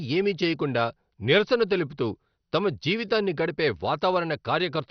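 Throughout, the speech sounds dull, gurgling and grainy, likely from heavy MP2 compression; a spectrogram shows sub-bands flickering on and off and nothing above 6.2 kHz.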